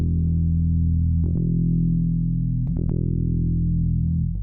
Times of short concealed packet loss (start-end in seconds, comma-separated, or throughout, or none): 2.67